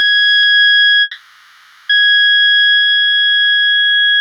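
At 1.01 s the music stops moving forward and freezes into a held, fading buzz that carries on until 1.91 s, roughly 0.88 s of filler. When the music comes back it picks up right where it left off, so nothing's been skipped; it's just running about 880 ms later from there on. That's the signature of a call audio freeze, most likely packets stalling in transit until the jitter buffer ran dry.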